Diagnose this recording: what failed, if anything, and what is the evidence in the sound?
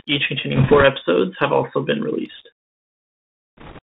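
The codec stage failed: the whole speech clip has gone through a Bluetooth CVSD headset codec. The band is held to roughly 150 Hz to 3.7 kHz, with a granular hiss and scratchy s sounds. This fits a 64 kbit/s one-bit delta stream whose adaptive step cannot keep up with fast high-frequency detail.

On the network link, bit errors on a Bluetooth voice link hit from 0.56 to 0.83 s and from 3.57 to 3.79 s. Both bursts add a rushing crackle rather than sharp clicks, because each flipped CVSD bit only nudges the waveform one step. An error rate of a few percent, slightly heavier in the second burst, produces this.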